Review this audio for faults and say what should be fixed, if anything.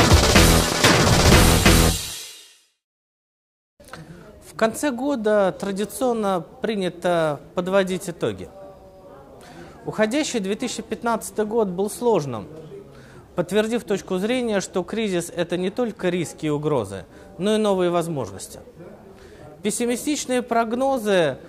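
Channel delay (comb filtering) from 13.67 to 16.02 s: one channel arrives a tiny fraction of a millisecond behind the other, which fits an offset of about one sample, and the mono sum cancels where the two are out of phase. With so short a lag, the first notch sits up near 20 kHz, so the effect is a slight dulling of the extreme top end rather than an obvious hollow sound. Keep both channels sample-aligned before any mono fold-down.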